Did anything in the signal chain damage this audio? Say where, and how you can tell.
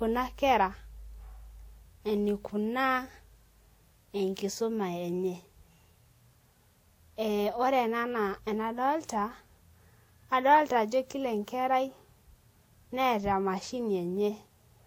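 Yes. At the codec stage the audio was likely transcoded between lossy codecs, and the damage runs through the whole speech clip. The band stops at 16.6 kHz, and two different kinds of coding artefacts are heard together, which fits a Vorbis encode re-encoded by WMA 1.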